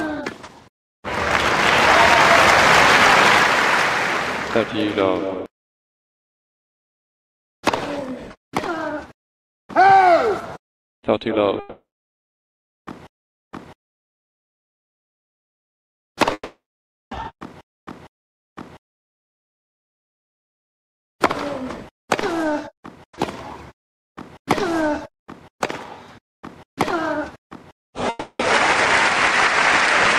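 The audio breaks off three times: from 11.59 to 12.16 s, 16.33 to 17.14 s, and 28.09 to 28.42 s. Each break begins with the last sound smeared into a fading buzz, then drops to silence for about 0.31 s, 0.58 s and 0.04 s respectively, before resuming further on with the intervening material gone. This pattern is likely a long network dropout, where the receiver concealed the missing stream until it gave up and went quiet.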